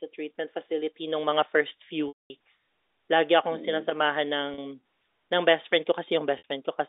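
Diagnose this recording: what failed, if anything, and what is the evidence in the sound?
Network packet loss with pitch repetition at 2.08 s (220 ms, fading to silence), 4.54 s and 6.38 s after "best friend" (40 and 60 ms, buzzy holds). The decoder loops the last pitch period.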